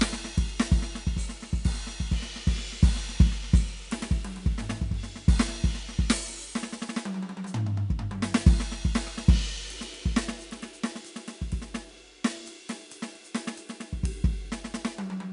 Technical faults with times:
0.00-15.32 4-bit ADPCM compression

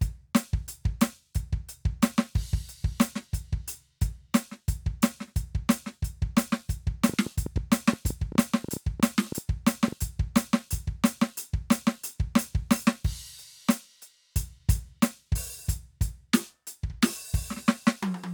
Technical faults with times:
7.09-9.93 train of clicks

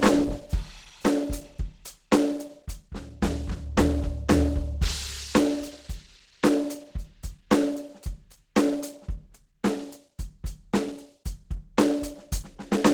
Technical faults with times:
0.00-12.93 Opus compression

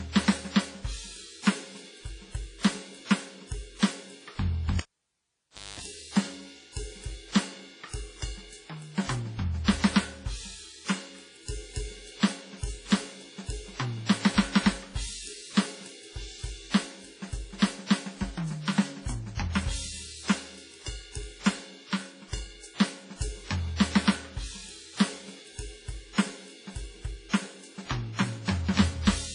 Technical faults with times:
0.00-29.35 WMA compression
4.79-5.80 cable pulled and plugged in

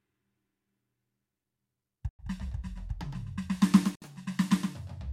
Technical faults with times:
0.00-5.13 doubled audio track
2.09-2.19 Bluetooth stall
3.95-4.02 Bluetooth stall

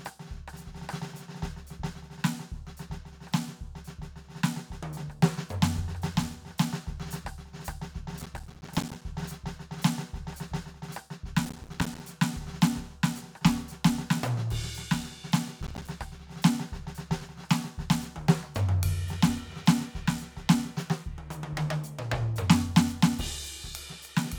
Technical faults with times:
8.19-9.02 processor overload crackle
11.45-12.00 processor overload crackle
15.62-15.88 processor overload crackle

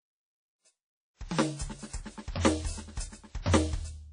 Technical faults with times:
0.00-4.12 WMA compression

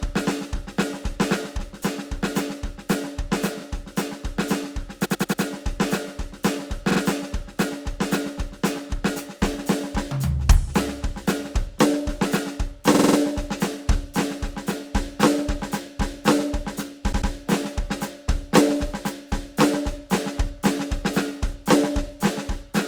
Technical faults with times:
5.04-5.41 repeated frames
6.90-6.99 repeated frames
12.94-13.17 repeated frames
17.11-17.30 repeated frames

